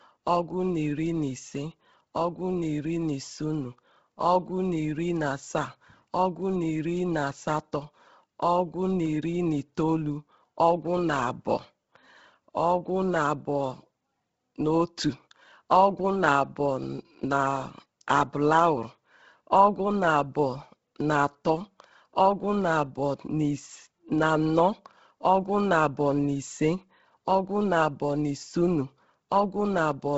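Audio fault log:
Throughout: Bluetooth LC3 compression, likely. The speech has a breathy, grainy edge, and nothing comes through above about 7.7 kHz. That fits LC3 running at a low bitrate around 16 kbps, which strips most of the upper band and patches the gaps with noise. The damage here is heavy.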